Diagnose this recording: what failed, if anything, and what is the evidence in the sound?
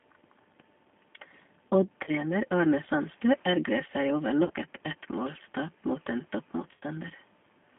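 G.729 codec damage runs through the whole speech recording, a codec-stage fault. The audio is confined to roughly 200 Hz to 3.4 kHz and sounds rough and synthetic, as the decoder rebuilds speech from a vocal tract filter, a pitch predictor and sparse pulses, which fits 8 kbit/s G.729A.

VoIP packet loss concealed by the speech codec, a network fault, appears at 2.04–2.11 s, at 4.45–4.52 s after "ergrer seg over", and at 6.74–6.83 s after "mot en". The gaps last about 30, 50 and 60 ms. The last is scattered over 80 ms, with a longest run of 40 ms. In each one the decoder stretches the previous pitch and filter into a buzzy tone or coloured noise that fades.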